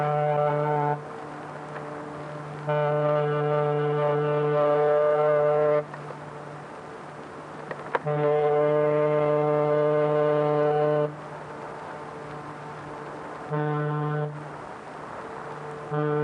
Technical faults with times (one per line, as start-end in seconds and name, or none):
none